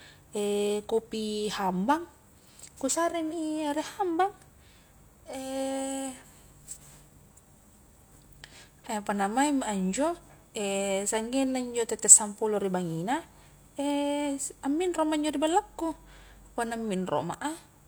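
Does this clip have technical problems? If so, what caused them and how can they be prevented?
No, there's nothing technically wrong to point to in this speech recording, so there's no cause to track down and nothing that needs preventing.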